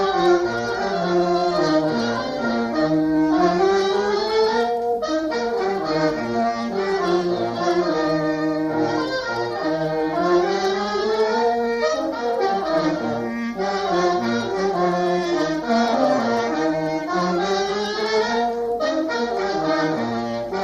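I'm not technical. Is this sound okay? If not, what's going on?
Yes, nothing wrong turned up on listening, so there's nothing to fix here.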